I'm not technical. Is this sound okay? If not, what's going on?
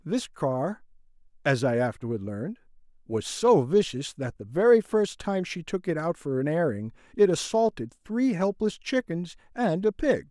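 Yes, it sounds fine.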